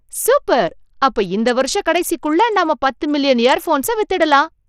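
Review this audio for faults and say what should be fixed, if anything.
Throughout the speech, the treble thins and flickers, with a gritty, grainy noise and aliasing riding on the sound. This is likely Bluetooth SBC compression at a small bit pool, fitting about 80 kbps, where the upper sub-bands are starved of bits and the rest are coarsely quantised. To prevent it, record through a wired path or raise the Bluetooth codec's bitrate or quality setting.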